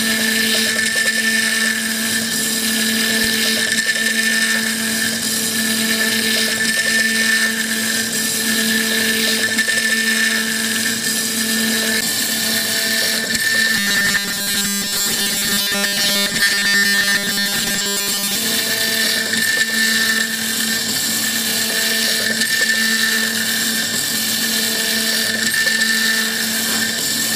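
The audio shows what is likely a playback path starved of new data, filling each gap by repeating the last short buffer of audio while the real material is skipped. From 13.75 to 18.35 s this produces robotic sound from repeated short buffers: for roughly 70 percent of that stretch a rigid, metallic buzz at 200 Hz, which fits a repeated block of about 5 ms, replaces the original sound and follows it only roughly.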